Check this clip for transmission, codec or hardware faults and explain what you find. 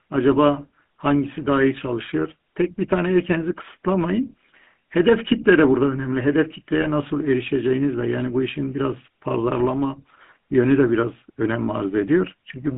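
The clip has two faults: GSM full-rate coding throughout, and one brief lost-frame concealment.

GSM full-rate codec: Across the whole speech clip there is a plainly audible buzzy, gravelly roughness. The sound is confined to a line band of roughly 150 Hz to 3.5 kHz, which fits the 13 kbps full-rate coder. This coder rebuilds the voice by exciting a vocal-tract filter with a regular pulse train that keeps only a third of the excitation samples, so the fine texture is lost. The gravel tells it apart from the smearing and warbly swirl of a modern low-bitrate codec.

Lost GSM frames: From 6.82 to 6.87 s the sound briefly freezes into a short metallic ring. The length points to a single lost 20 ms frame. The decoder fills the gap by repeating the previous good frame's settings. The held, ringing tone, rather than a silent hole or a click, separates it from a plain dropout, and the gap is far too short to fade fully away.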